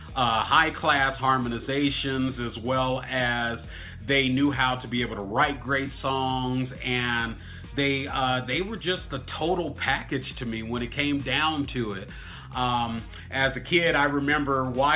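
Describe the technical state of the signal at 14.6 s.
At 14.6 s the audio is intact, with no dropout, distortion or other fault to be heard.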